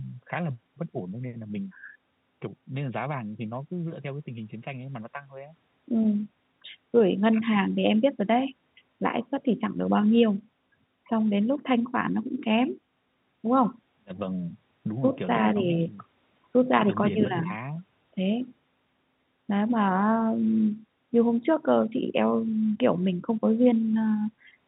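Nothing in this speech clip is technically wrong. It carries the sound of G.711 telephone coding, with nothing above 4 kHz and only faint quantisation noise riding under the signal level.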